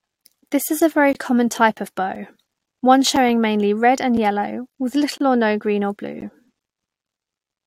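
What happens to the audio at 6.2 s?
At 6.21 s there is a gap between stream segments: the time stamps of two adjoining pieces of the stream, which fits 1.0 s segments, do not quite meet, and the player pads the mismatch with silence. In the speech this is heard as a hard-edged hole of about 15 ms, a brief dropout that cuts in and out abruptly. Nothing is removed; the sound simply resumes slightly later.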